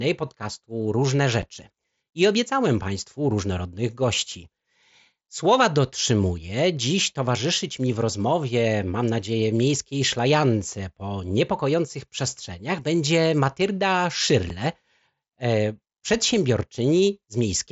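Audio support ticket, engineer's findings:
Unconcealed Bluetooth headset packet loss at 1.42 s and 14.49 s: brief dropouts in the speech, each about 7.5 ms, with hard edges. Waveform shows a flat gap; spectrogram shows a thin vertical blank stripe. Headset-to-phone radio link lost one voice packet and nothing filled it. The audible band tops out near 8 kHz, consistent with the mSBC headset codec in use.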